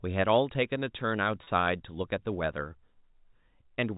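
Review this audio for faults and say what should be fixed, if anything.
At 1.44 s the speech briefly stalls into a slightly held, buzzy tone lasting until 1.47 s, heard over the narrow telephone-band sound of G.711 telephone coding. This is packet loss with pitch repetition: about 30 ms of audio went missing, which fits a single lost packet, and the receiver filled the gap by repeating the last pitch period. To prevent it, add a jitter buffer or forward error correction on the network path.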